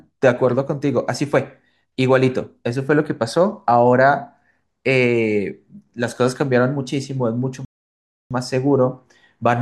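Speech clip with one playback stall: the sound drops to silence from 7.65 to 8.31 s, about 0.66 s, then resumes, likely the player starving for data or blocking briefly.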